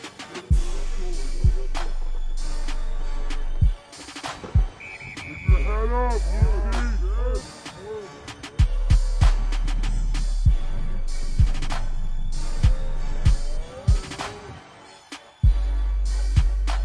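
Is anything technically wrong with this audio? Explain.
Yes. Throughout the clip, there is a wrong sample rate: the audio is being played back slower than it was captured, with no rate conversion, which fits 32 kHz material played at 22 kHz. Everything runs at 0.689 times normal speed and sits about 6.45 semitones low, so the sound is dragged out and deepened.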